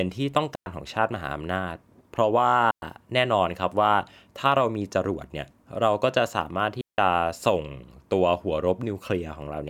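Three clean holes of near silence break the speech, with no click or noise burst at either edge: 0.55 to 0.66 s (about 110 ms), 2.71 to 2.82 s (about 112 ms), and a longer one from 6.81 to 6.98 s (about 173 ms). These are digital wireless dropouts. The radio link lost too much data, so the receiver muted behind a very short fade rather than passing corrupted audio, then restored the sound once reception recovered.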